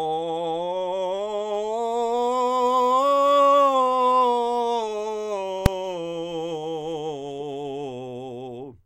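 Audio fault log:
5.66 s, invalid numbers at full scale: a single sharp bang in the music, lasting about 2.9 ms, which fits a 128-sample block. Infinite or invalid values from a calculation were pinned to maximum amplitude, so the whole block sits flat at one extreme value far beyond the music's peaks, and the start and end edges merge into one pop.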